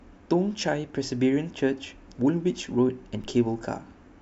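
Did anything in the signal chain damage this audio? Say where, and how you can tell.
Yes. At 3.24 s there is a DC step: a single low thump as the waveform's zero line jumps by about -36 dBFS while the speech carries on unchanged. The offset then drains away slowly, at the rate of a high-pass around 2 Hz, which points to coupling or DC-blocking after the jump. This places the fault at the converter or analogue input stage, where a recalibration or a switched-in offset shifts the baseline in one step.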